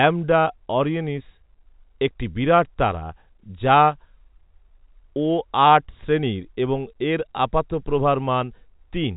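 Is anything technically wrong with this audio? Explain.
No, nothing technically wrong is audible here.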